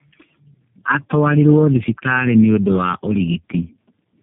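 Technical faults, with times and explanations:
Throughout, tandem speech coding: the speech sounds rough, muffled and warbly, with nothing above about 3.5 kHz. The call passed through three low-rate speech codecs in a row, an AMR-NB 6.7 kbit/s, an iLBC 15.2 kbit/s and finally a G.729A 8 kbit/s, with G.711 links between them. Each codec re-encoded the damaged output of the one before, so their separate distortions stacked up into a harsher, duller sound than any single codec would give.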